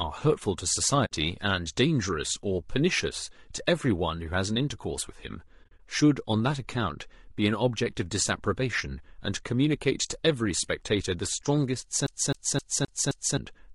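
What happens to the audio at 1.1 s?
At 1.05 s the speech drops out in an AAC frame loss with muting, lasting until 1.12 s. The decoder had nothing to play for those frames, so it set their spectrum to silence. The overlapping windows fade the sound down into the hole and back up after it. The result is a soft-edged gap of about 60 ms. A gap that long points to a few consecutive lost frames.

Around that gap, the speech has the rough, grainy texture of low-delay AAC compression. The cause is likely AAC-ELD at 32 kbps. Its short frames resolve the pitch harmonics poorly. They also use bits less efficiently at this rate. The damage is plainly audible. Noise fills the spaces between harmonics, and the top band sounds thin and synthetic.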